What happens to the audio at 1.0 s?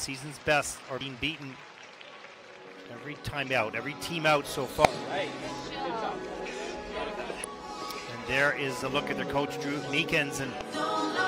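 At 1.01 s there is a burst of damaged data in the compressed stream. Part of the encoded audio is wrong there. The decoder misreads that frame, loses sync and searches for the next valid frame header. The result is a very short glitch, about 4 ms long.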